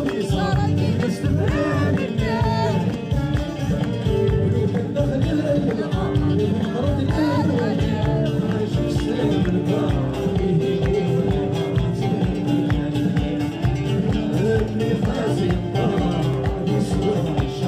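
There are sharp single clicks at 2.94 s, 14.37 s and 16.34 s. Each is a dropped samples event: the waveform likely skips ahead by well under a millisecond, jumping between values. Nothing audible goes missing, just a thin vertical line across the spectrum.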